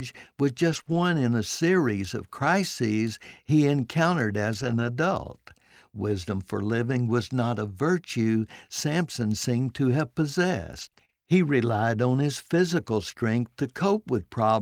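Lost packets rebuilt from error correction at 0.71 to 0.81 s: low-bitrate backup copies carried in later packets filled about 60 ms without a gap, leaving the audio rougher and noisier.

Short concealed packet loss at 0.83 to 0.87 s: about 20 ms never arrived in time. The decoder extended the preceding sound, leaving a brief smear or wobble.

More lost packets rebuilt from error correction follow at 0.87 to 0.97 s and again at 4.55 to 4.89 s. The second stretch carries about 180 ms of grainy, noisier rebuilt audio.

Repeated packet loss (robotic sound) at 10.81 to 11.14 s: four separate gaps, the longest 30 ms, were each patched by continuing the last sound. About 80 ms went missing, giving a choppy stretch with pieces missing.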